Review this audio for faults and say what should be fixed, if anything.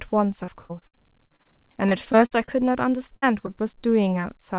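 Repeated packet loss (robotic sound) runs from 0.44 to 1.47 s and again from 1.89 to 2.63 s. The first stretch has eight gaps, the longest 58 ms, and concealment fills about a quarter of it. The second has six gaps, the longest 53 ms, with about a fifth concealed. Each gap is covered by extending the previous sound, and the next gap arrives before the speech settles. The result is a choppy chatter with pieces missing. What distinguishes it from a single burst is the rapid repetition across a span of up to about a second, not one isolated hole. Tightening network QoS and enlarging the jitter buffer on that link would prevent it.

A burst of packet loss removes about 60 ms at 3.16 to 3.24 s. The receiver holds the last sound and turns it down as the gap goes on, so a brief fading buzz or hiss replaces the missing stretch, and the speech resumes further along with that part gone. Unlike the repeated loss, it is one dip with intact audio on either side, and it is longer than the short concealments around it. 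Forward error correction or redundant packets would cover a run of this length.

Short concealed packet loss occurs at 3.08 to 3.12 s, where about 20 ms was patched, and at 3.46 to 3.51 s. Each is a quick smear or wobble where the decoder continued the preceding sound and blended back in. A burst is a longer fade, but these are only 12 to 20 ms long, so they can clip a consonant without producing a held buzz. The call path's 4 kHz ceiling, which fits narrowband G.711, is present throughout. Better jitter-buffer sizing would absorb late single packets like these.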